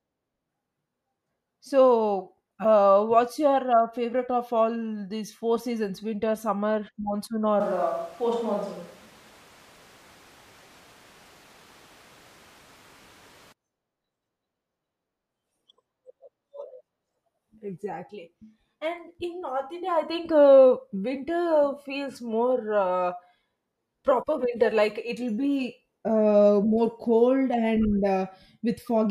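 From 7.61 s to 13.52 s, the speech suddenly turns roomy and hollow. The bass thins out. Background noise rises to roughly 25 dB below the speech. The overall level stays about the same. At 13.52 s the close, full sound returns just as abruptly. This is a switch to a distant microphone. The likely cause is that the close microphone's signal dropped out and a microphone further from the talker, such as a camera's, filled in.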